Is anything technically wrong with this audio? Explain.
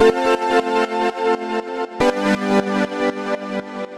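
No, nothing is technically wrong with this audio.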